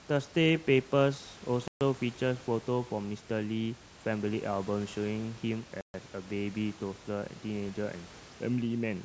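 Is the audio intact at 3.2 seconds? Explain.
Yes, the audio is intact at 3.2 seconds, with only the room's own background noise sitting about 21 dB below the speech.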